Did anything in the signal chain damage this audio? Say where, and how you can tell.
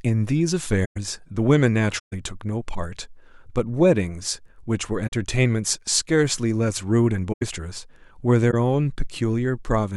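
Yes. Corrupt frame concealed, at the codec stage, at 0.84–0.97, 1.98–2.13, 5.07–5.12, 7.32–7.43 and 8.51–8.54 s. The AAC decoder caught the flipped bits and papered over those frames.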